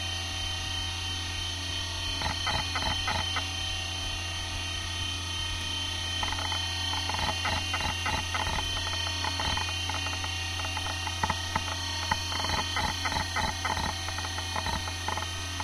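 From start to finish everything runs fast and sits high, about 1.45 times normal speed and roughly six and a half semitones sharp. It's a wrong sample rate fault. Audio recorded around 22 kHz is being played back near 32 kHz without conversion, so speed and pitch rise together.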